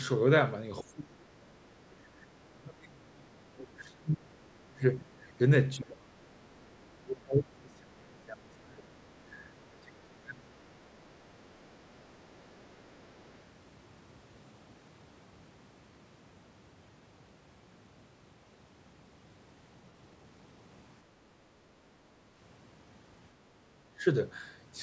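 From 0.83 to 5.19 s, 5.78 to 6.53 s and 7.02 to 11.17 s the speech keeps sinking and breaking apart, falling by up to roughly 30 to 35 dB. This is speech suppressed in double talk, likely the echo canceller turning both sides down while they talked at once.

Between 11.95 and 13.33 s a very faint second voice, around 40 dB below the talker, sits underneath. This is the other side's voice leaking through, likely loudspeaker playback that the echo canceller did not fully remove from the microphone.

At 23.95 to 24.04 s a much shorter, milder dip of about 10 dB briefly pulls the speech down again, the same double-talk suppression.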